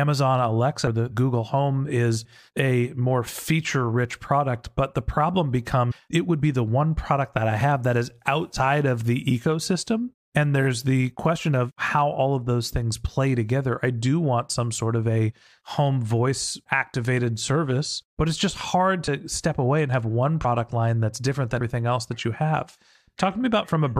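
At 0.86 s the speech jumps forward, losing about 150 ms. Compressed frames were skipped: whole frames of roughly 23 ms each were dropped, so the sound lurches ahead. The same compressed-frames-skipped jump recurs at 5.9 s (about 200 ms), 8.55 s (about 100 ms), 19.07 s (about 50 ms), 20.44 s between "away and have one" and "line that's different" (about 100 ms), and 21.6 s just after "line that's different" (about 200 ms).

At 7.61 s, between "one product that I" and "that is", and again at 17.49 s, a tiny skip of a few milliseconds is heard. Ten seconds apart, this is likely audio missing between chunks, lost as one 10 s chunk closed and the next opened.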